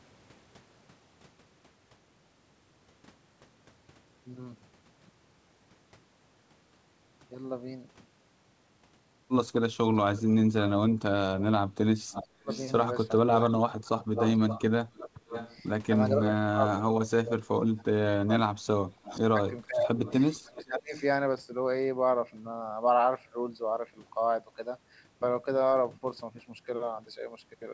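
At 10.15 to 10.7 s a faint, delayed copy of the speech appears, about 15 dB below the talker and trailing it by roughly 470 ms. This is an echo leak. The far end's sound was likely played on a loudspeaker and only partly removed by the echo canceller before being sent back. The copy is a distinct repeat nearly half a second late, not room reverberation, which would smear directly onto the original.

From 11.39 to 20.95 s there is speech suppressed in double talk. While both sides talk, the talker's level repeatedly sinks, at its deepest by about 30 dB, for about 4 s in total. The canceller likely could not separate the talker from the echo and turned everything down. The dips follow the overlap, unlike packet loss, which gives abrupt gaps.

The echo leak returns at 12.11 to 16.76 s, now louder at about 10 dB below the speech and about 490 ms late. A brief scrap at 17.77 to 17.81 s sits around 35 dB down with a delay near 500 ms. 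A final stretch at 19.03 to 21.03 s, about 20 dB down, lags by roughly 510 ms. The lag grows slightly from one stretch to the next.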